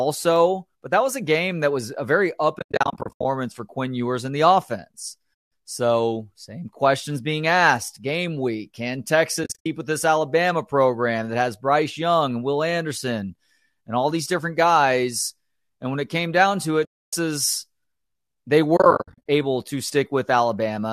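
AAC frame loss with muting, where lost frames were decoded as silence, leaves soft-edged holes at 2.59–3.25, 5.38, 9.44–9.66, 16.85–17.13 and 18.77–19.29 s. They show as blank spectrogram gaps with tapered waveform edges.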